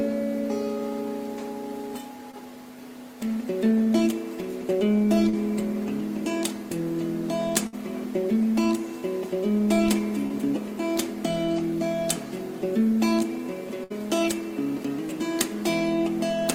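A recording of everyday sounds, marred by brief smears or wobbles at 2.31 to 2.35, 5.29 to 5.35 and 10.27 to 10.32 s. These are short concealed packet loss: 20 to 40 ms of audio arrived too late, and the receiver patched each hole by extending the preceding sound before blending back. At 7.67 to 7.75 and 13.84 to 13.92 s the sound briefly hangs and fades, then jumps ahead. Each is a burst of packet loss: about 60 ms in a row went missing, so the last sound was stretched and faded until real audio resumed.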